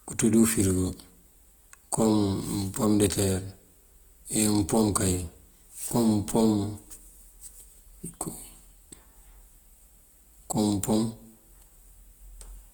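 From start to finish the speech sounds grainy and rough, likely Opus compression near 24 kbps. Bands stay filled up to 20.1 kHz, without MP3's swirling spectral holes.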